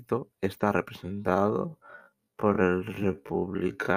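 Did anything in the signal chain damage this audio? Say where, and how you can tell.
Yes. A time-stretched section runs from 1.0 s to the end of the clip. At that point the speech abruptly drops to about half its pace, a speed of 0.51x, while its pitch stays where it was. The slowed part drags. The likely cause is software in the editing or playback stage lengthening the audio to fill a set duration, holding the pitch steady by repeating short slices of the waveform.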